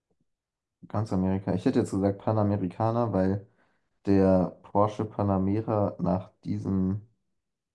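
No technical faults can be heard anywhere in this speech recording. There is nothing in the signal that calls for a timestamp or a second listen.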